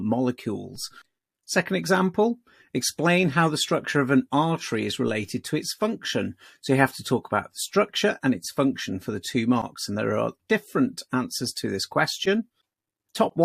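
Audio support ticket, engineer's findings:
DC step in the signal path, zero line jumps by about -40 dBFS at 0.75 s and again at 5.07 s; offset bleeds away through a roughly 2 Hz high-pass. Probable converter recalibration or offset input switched in. Symptom: brief low thump at each step, sound continues unchanged.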